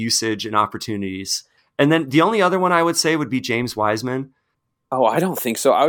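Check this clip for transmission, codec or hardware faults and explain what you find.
No transmission or hardware faults.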